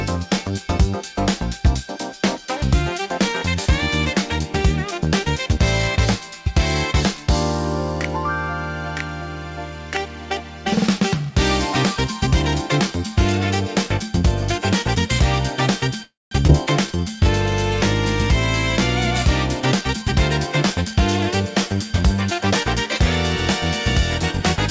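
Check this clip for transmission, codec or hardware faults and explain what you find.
The clip shows four kinds of transmission fault, all jitter-buffer or packet-delivery problems, clustered between 16.03 s and 20.95 s. The audio has no content above 8 kHz, which fits G.722 coding at 64 kbps on a call path.

Call audio freeze, 16.03 s to 16.33 s: the audio stops and 284 ms of filler is inserted, about 200 ms of it silent, after which playback resumes where it halted. The likely cause is late packets draining the jitter buffer, so delay increased and nothing was lost.

Skip ahead, at 16.47 s to 16.51 s: playback jumps forward with only a 14 ms bridge, dropping roughly 150 ms of audio. Packets were discarded, either in transit or by an overflowing jitter buffer, while later audio was already queued, so the two sides join almost directly.

Jitter buffer slow-down, 16.87 s to 17.25 s: the audio plays at 82% speed with unchanged pitch, sounding drawn out. 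The receiver repeated single pitch periods or pause fragments, adding 78 ms to rebuild its reserve after running low or raising its target delay.

Jitter buffer speed-up, 19.61 s to 20.03 s at 110% and 20.47 s to 20.95 s at 108%: the audio sounds hurried at the same pitch. The buffer held excess audio, so the receiver cut short pitch-period segments, removing roughly 50 ms in each stretch to reduce delay.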